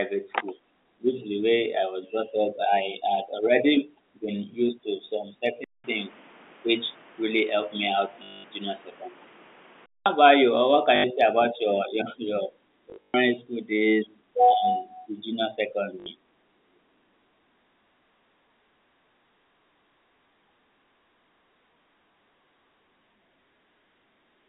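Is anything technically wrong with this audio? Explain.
Yes, two faults are audible in this speech.

From 5.64 to 10.06 s the input switched to a poorer device, likely a second microphone or headset call profile. After a 200 ms gap the speech turns boxy, with nothing above 3.8 kHz and a new noise floor roughly 30 dB down, and the level stays about the same.

Packet loss with the last packet repeated occurs at 8.24 to 8.44 s (200 ms), 10.96 to 11.04 s (80 ms), 12.90 to 13.14 s (180 ms scattered over 240 ms, longest run 120 ms) and 16.00 to 16.06 s (60 ms). Replaying the last packet makes a robotic buzz at 50 Hz, which fits 20 ms packets. On a waveform it shows as identical repeating blocks, and on a spectrogram as vertical striping. The underlying G.711 telephone band of roughly 200 Hz to 3.7 kHz is the normal line character.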